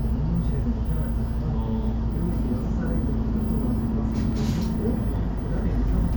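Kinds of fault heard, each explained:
Clock drift buffer slips: a short click recurs at a steady interval of about 1.43 s, from roughly 1.47 s to 5.75 s, about four in all. The likely cause is two devices running on separate clocks about 200 ppm apart, so the buffer between them drifts until a small block of samples, around fifteen, is dropped or repeated. The clock-like regularity of the clicks is what separates this from random packet-loss dropouts or irregular glitches.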